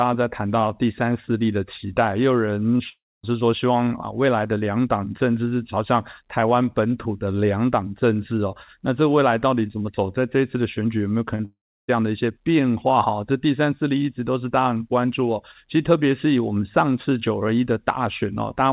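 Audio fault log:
2.78–2.81 s and 11.35–11.41 s, short concealed packet loss: two brief smears where about 20 ms and then about 40 ms of audio didn't arrive in time. The receiver papered over each gap by stretching the last bit of sound forward and crossfading back into the real signal, so you get a quick smear or wobble rather than a clean hole. Both sit right before the bigger gaps below, so the link was already struggling.
2.89–3.25 s and 11.45–11.90 s, long network dropout: this is most likely the network going quiet for a real stretch, about 340 ms the first time and 440 ms the second. Each starts with the last sound carried on as a fading buzz or hiss, then drops to dead air for about 250 ms and then about 330 ms before the audio picks up again further along, with the missing part gone. Everything sits in a band that stops at 4 kHz, which fits a G.711 A-law phone codec on the call path.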